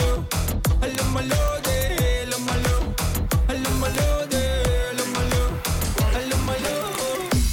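Sharp, loud clicks land at 0.95, 3.95 and 6.95 s, evenly spaced every 3.0 s regardless of the audio. That regularity marks a file header played as audio, joined pieces keeping their headers, rather than random clipping ticks or dropouts.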